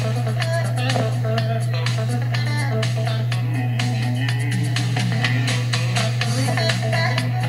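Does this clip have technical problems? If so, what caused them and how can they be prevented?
No, there are no technical problems to report here.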